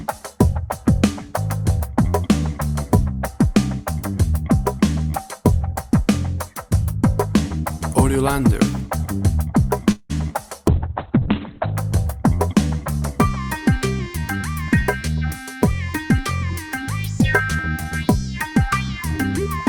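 A call audio freeze runs from 9.91 to 10.12 s. The sound is drawn out for about 180 ms as a fading continuation, with roughly 70 ms of near-silence, then resumes where it stopped. That pattern points to packets likely held up in transit until the jitter buffer ran dry. Short concealed packet loss follows at 10.32 s, where about 20 ms never arrived in time and the receiver bridged the hole by extending the preceding sound, leaving a brief smear. A call bitrate drop from 10.69 to 11.84 s turns the sound coarse and muffled, with the top end cut to about 4 kHz for roughly a second, which fits the encoder being throttled from around 96 kbps to 6 kbps after the bandwidth estimate fell. A jitter buffer speed-up from 14.17 to 15.71 s plays the audio about 6% fast at unchanged pitch, as pitch-period slices totalling around a tenth of a second are trimmed to shrink an overfull buffer. A second speed-up from 17.25 to 17.85 s runs about 8% fast and removes roughly 50 ms.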